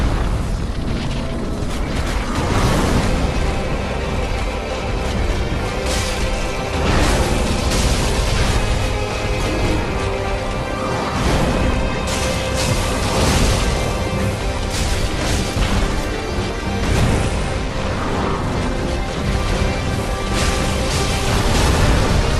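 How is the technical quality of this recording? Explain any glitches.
No glitches, dropouts or other technical faults can be heard in this recording.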